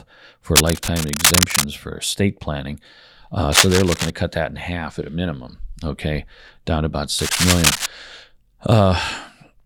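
Cable scratch noise, about as loud as the speech, crackles over 0.56–1.64 s before "for estate planning", 3.52–4.10 s before "cut that in half", and 7.18–7.86 s after "down about", likely from a worn connector or cable shifting.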